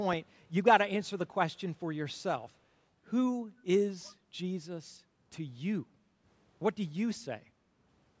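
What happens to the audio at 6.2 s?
At 6.2 s you're in the tail of some background gated by the echo canceller, from 5.93 to 6.24 s: it ducked the mic about 10 dB while the far end played, so the room sound dips.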